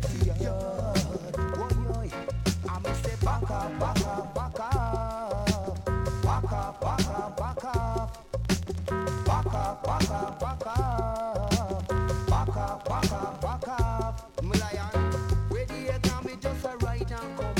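The audio carries a train of clicks from 8.45 to 13.03 s. Around fifty similar pulses arrive at an uneven pace, near 10 per second, peaking roughly 5 dB above the sound. The cause is likely interference or a faulty connection or power supply injecting repeated pulses.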